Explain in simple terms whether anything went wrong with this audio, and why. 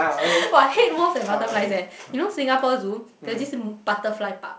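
Nothing went wrong here: the speech comes through G.722 wideband telephone coding, which carries more of the higher sounds than an ordinary phone line, and any trace that coding leaves is faint enough that you'd be hard pressed to pick it out.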